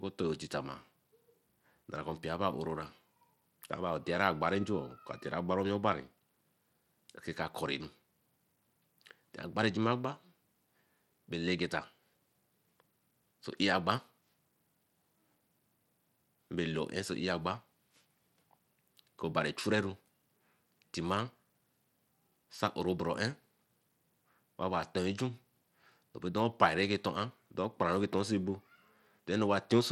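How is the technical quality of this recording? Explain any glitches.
The recording has audible coding damage from start to finish. Throughout the speech, the treble sounds unstable, flickering in and out, and a gritty, grainy noise sits on top of the voice. The likely cause is Bluetooth SBC compression at a low bit budget, consistent with roughly 96 kbps. With so few bits, the codec starves the upper sub-bands and quantises the rest coarsely, which produces the wavering top end and the rough texture. Nothing is present above 19.8 kHz.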